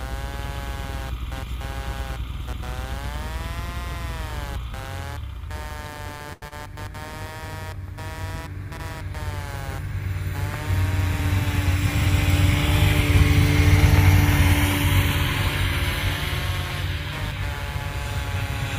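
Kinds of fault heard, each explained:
computer activity noise: Buzzing from the computer's load changes leaking through shared ground. Here it pulses at around 150 Hz throughout, roughly 15 dB below the sound.
short stall from a late packet: A late packet emptied the jitter buffer. At 6.33 to 6.45 s the sound is held for 92 ms, then resumes with nothing lost.
short concealed packet loss: Audio reached the decoder too late. At 6.48 to 6.54 s about 60 ms is missing, covered by a brief 33 ms smeared fill.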